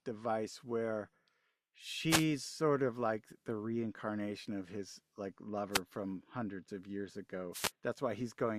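Wireless microphone noise hits occur three times: 2.08 to 2.25 s, 5.71 to 5.81 s and 7.52 to 7.72 s. In each, the analogue FM radio link between microphone and receiver weakens as reflected copies of the signal cancel the direct one. The receiver's own noise then surges over the speech, so each drop is heard as a brief swish or burst of static, roughly a tenth to a fifth of a second long.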